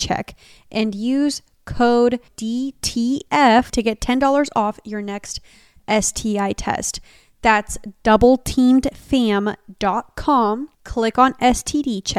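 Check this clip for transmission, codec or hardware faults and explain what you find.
One hardware fault is present. From 1.77 to 2.11 s, just after "and use", there is a phantom power thump. A supply switched on a live input sends a voltage step through the coupling capacitors, giving a deep thump peaking around -18 dBFS that decays in 76 ms. Unlike handling noise or a plosive, it is a single clean low pulse with no rustle or breath.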